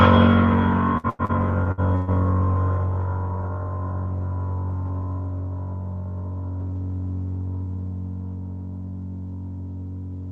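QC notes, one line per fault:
0.97–2.10 s: repeated packet loss (robotic sound). The music turns choppy. About six gaps appear, the longest 120 ms. Roughly 380 ms is patched by stretching the preceding sound, and 180 ms is simply missing. Around a third of the stretch is concealed.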